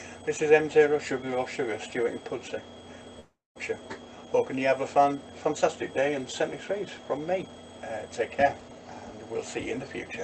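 From 3.19 to 3.58 s, likely a long network dropout: the sound smears into a fading buzz, goes nearly silent for 0.21 s, then resumes with 0.36 s lost. A spectrogram shows blurred flat bands fading to an empty gap; the waveform shrinks to almost nothing.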